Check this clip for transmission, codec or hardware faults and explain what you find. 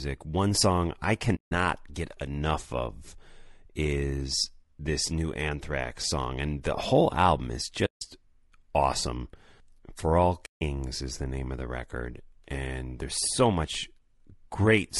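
Two faults are present: codec damage across the whole speech clip, and three short muted gaps.

Low-delay AAC compression, throughout: the rough, grainy quality likely comes from AAC-ELD, the low-delay codec used for video calls, at a bitrate around 32 kbps. At this low bitrate it cannot code the voice's pitch harmonics cleanly. The coarse coding leaves noise filling the spaces between harmonics and makes the upper band sound dulled or synthetic. The damage is plainly audible throughout.

AAC frame loss with muting, at 1.35–1.52 s, 7.85–8.02 s and 10.45–10.62 s: each gap lasts about 0.17 s, which fits roughly eight lost frames. The decoder zeroed the missing spectrum, and the overlapping windows fade the audio down and back up, leaving a soft-edged silence. The first falls between "song I" and "get enough of is", the second just after "the whole album is", and the third just before "is the name of".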